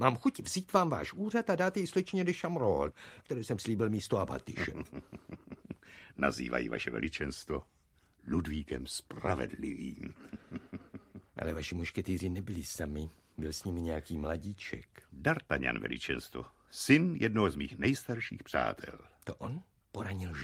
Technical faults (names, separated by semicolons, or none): none